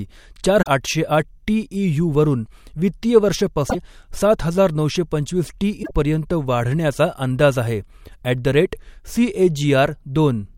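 At 0.59 to 0.68 s, 3.66 to 3.75 s and 5.80 to 5.91 s, the speech is interrupted by short glitches, each about 0.1 s long. These come from damaged data in the compressed stream: the decoder misreads the corrupted frames and loses sync until it finds the next valid frame header.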